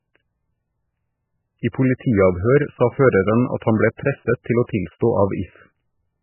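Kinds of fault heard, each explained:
Low-bitrate audio saved at a high bitrate: The speech has nothing above 3 kHz. This likely comes from a very low-bitrate MP3 later re-encoded at a high bitrate, which restores nothing.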